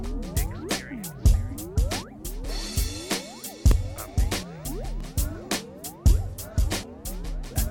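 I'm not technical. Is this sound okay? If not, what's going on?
No. There is a block of digital silence at 3.71 s and again at 5.00 s: the music drops to nothing for about 1.3 ms and snaps straight back, heard as a tiny tick, because the playing program missed filling a small chunk of audio in time.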